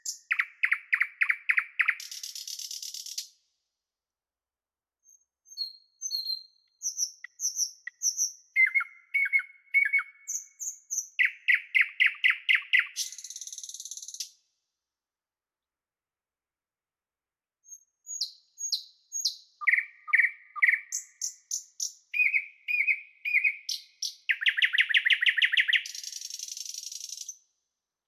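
Nothing stood out on listening to the sound in this clip.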